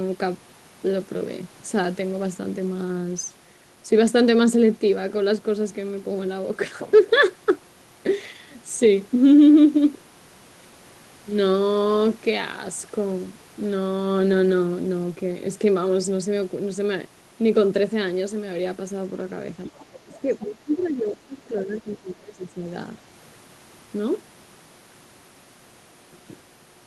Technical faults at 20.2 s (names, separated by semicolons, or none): speech suppressed in double talk; other side's voice leaking through